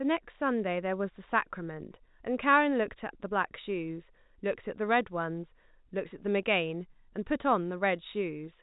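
Speech, with no technical faults to report. It has passed through G.711 telephone coding, so nothing above 3.8 kHz is present, which gives it the familiar narrow sound of a landline call.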